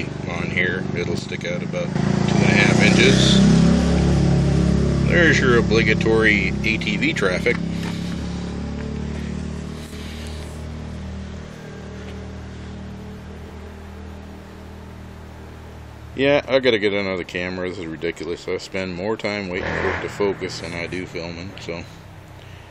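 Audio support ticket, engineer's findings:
Abrupt level drop of about 6 dB, 1.19–1.95 s, roughly 0.77 s long. Level then returns. Likely cause: one channel drops out. With identical content on both channels, losing one halves the summed signal. Tone and balance otherwise unchanged. Second event at 9.86–9.92 s, about 60 ms. Same step of about 6 dB, heard as a brief dip. Same likely mechanism: momentary loss of one channel before the sum.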